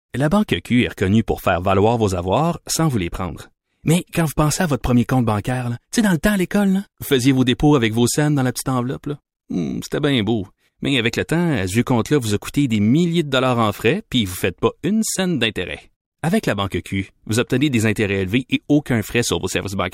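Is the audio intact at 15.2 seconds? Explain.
Yes, the speech at 15.2 seconds is intact, with no dropout, click, distortion or other fault at that moment.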